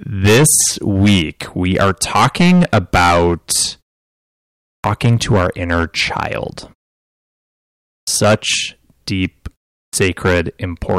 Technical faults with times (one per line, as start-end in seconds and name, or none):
0.00-10.98 hard clipping
4.73-4.84 clipped start after a pause
7.94-8.07 clipped start after a pause
9.80-9.93 clipped start after a pause